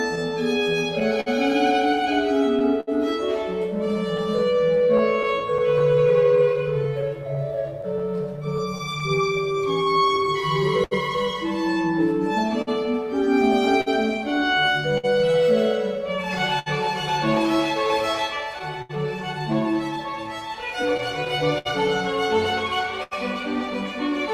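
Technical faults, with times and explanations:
Throughout: clock drift between sender and receiver. The sender's clock runs roughly five percent slow, so the receiver's buffer keeps draining and must be refilled. The result is a faintly unsteady pace with recurring hiccups. On a spectrogram this shows as small, unevenly spaced discontinuities where harmonic traces jump or briefly stall.
0.15–9.03 s: scattered short gaps. About twenty lost or late packets, the longest around 70 ms, were patched by extending the preceding sound, roughly 300 ms concealed in total. They are heard as brief smears or ticks. A spectrogram shows short flat, frozen-looking strips interrupting otherwise moving spectral detail.
0.35–24.32 s: repeated timing corrections. Running at 99% speed, the receiver repeatedly inserts short repeated pieces, adding around 300 ms overall to keep pace with the slow sender. Each edit is slight, giving a subtly dragging tempo. 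The waveform shows duplicated cycles at splice points, unevenly spaced.
10.84–23.13 s: scattered short gaps. Around fifteen dropouts, none longer than about 70 ms, were filled by continuing the last sound, some 700 ms concealed. They are audible as small hiccups and smeared onsets. A spectrogram shows brief held, blurred bands where detail should change.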